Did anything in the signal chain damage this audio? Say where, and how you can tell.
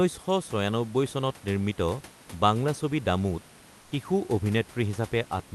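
Yes: the codec likely stopped transmitting, so 3.81–3.91 s has comfort noise in place of the background, steady and featureless, about 2 dB quieter.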